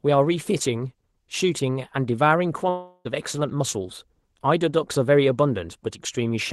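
Long network dropout, 2.69 to 3.07 s: likely lost packets. The receiver smears the last sound into a fading buzz, and speech resumes with that stretch gone.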